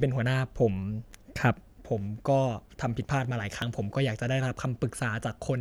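A speech recording in which the capture side likely fell behind and the hardware overwrote samples before they were collected, a dropped buffer (overrun), three times: at 1.12, 3.62 and 4.99 seconds. Each time roughly 20 ms of audio is lost and the two sides are spliced together with no gap, so instead of silence there is a sudden skip forward in the speech.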